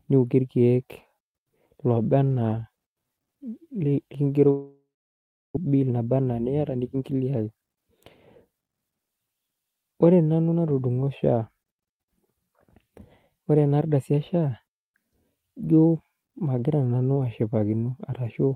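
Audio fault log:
4.50–5.58 s, long network dropout: A likely break in packet delivery left the receiver with nothing to play for just over a second. It stretched the last sound into a buzzy tail that fades, then about 0.7 s of silence follows. When sound returns at 5.58 s, roughly 0.8 s of material is simply gone, and playback now sits around a fifth of a second later than before.
5.66–7.02 s, 7.49–7.93 s, 8.45–8.78 s, jitter buffer speed-up: After the dropout, delayed audio piled up in the jitter buffer beyond its target depth. The receiver drained the excess by cutting out many tiny pitch-period slices. The speech rushes at 109%, 111% and then 115% speed in these three runs while keeping its pitch. About 150 ms, 50 ms and 50 ms are trimmed, giving a hurried, clipped delivery.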